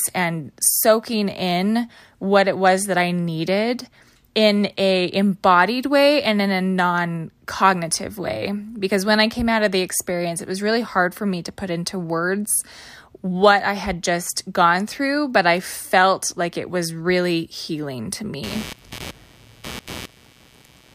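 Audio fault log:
18.43 to 20.95 s, computer activity noise: just after "was really healing to", a buzzing, chirping texture rises under the speech and runs to the end of the clip. It pulses at around 150 Hz and sits roughly 15 dB below the speech. Its rhythm follows no pattern in the talking, because it comes from changing processor, graphics or mouse load disturbing the ground that the audio circuit shares with the computer.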